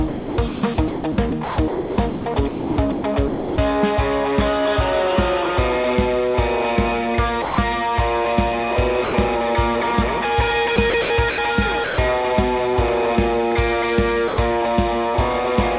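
The sender's voice detector likely switched on and off repeatedly from 0.08 to 3.58 s and again from 10.76 to 11.38 s, so the sound there is chopped by the voice detector, with parts swapped for comfort noise. The same detector also likely stopped sending at 7.42 to 7.58 s, 9.04 to 9.14 s, 11.84 to 11.98 s and 14.28 to 14.38 s, so sound is dropped by the voice detector, giving way briefly to steady comfort noise. The call-path band limit leaves nothing above 4 kHz, consistent with a 64 kbps G.711 A-law link.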